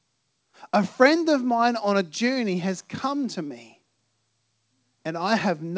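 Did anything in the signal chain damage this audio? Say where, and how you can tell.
No, nothing in the signal chain has damaged this speech. The audio has come through a call path with nothing above 8 kHz, which fits a wideband codec such as G.722 at 64 kbps, and that band limit is what such a call normally sounds like.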